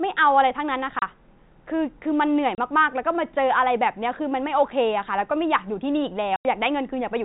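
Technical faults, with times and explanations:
0.99–1.02 s, 2.55–2.58 s and 6.36–6.45 s, packet loss filled with silence: the speech drops out abruptly into dead silence, twice for 30 ms and once for 90 ms, each gap with hard edges. The receiver lost data and played nothing in its place. The 30 ms and 90 ms lengths point to 30 ms packets, with one missing in each short gap and three in the long one. The telephone-band G.711 sound of the call stays the same through each gap.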